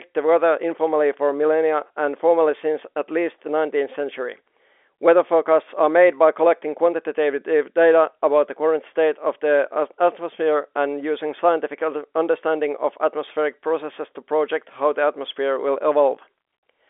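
Nothing stood out on listening to this speech recording, which comes across with the narrow band of a telephone line.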